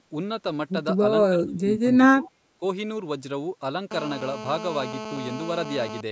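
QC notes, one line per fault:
1.30–2.29 s and 2.58–2.62 s, speech suppressed in double talk: the speech level drops in patches, by roughly 25 dB at its deepest across the first span, with about 0.7 s of it actually pulled down, and by around 15 dB in the brief second dip. The likely cause is the echo canceller meeting simultaneous far-end talk. Unable to separate the near talker from loudspeaker echo, it attenuates both, so the speech sinks while the other side speaks.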